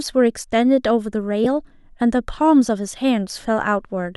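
At 1.44 s, lost LE Audio frames interrupt the speech for about 15 ms, which fits two dropped LC3 frames. The decoder fills the gap by repeating the last spectrum with randomised signs, so that instant turns into a brief noisy smear rather than a clean click or silence.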